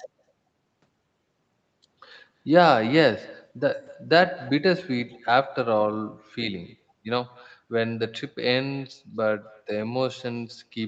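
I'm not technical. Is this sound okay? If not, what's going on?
No, there's an echo with no canceller running through the whole recording. On the other end of the call, a loudspeaker played this voice, their microphone picked it back up, and nothing stripped it out. So every bit of speech is followed about a fifth of a second later by a faint, thinner copy. It's quiet, but it sits behind the voice from start to finish and shadows it.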